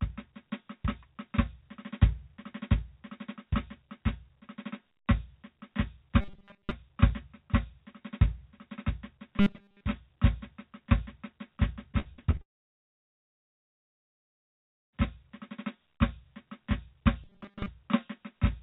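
At 6.21 to 6.71 s, 9.38 to 9.84 s and 17.24 to 17.68 s the music collapses into a rigid metallic buzz at 200 Hz. This is robotic sound from repeated short buffers: the likely cause is late audio delivery, with playback looping the last 5 ms over and over while most of the real signal is skipped.

From 11.92 to 12.41 s there is repeated packet loss (robotic sound). A run of closely spaced gaps, the longest about 50 ms, is each patched by stretching the preceding sound. Roughly a third of the stretch is filled this way, giving a choppy, robotic texture with pieces of the music missing.

A long network dropout follows immediately, from 12.41 to 15.05 s. The last sound trails off briefly as a fading buzz and then gives way to silence. The music resumes at 15.05 s without the roughly 2.5 s that likely never arrived. Throughout the clip nothing is heard above 4 kHz, which fits the narrowband G.711 call path.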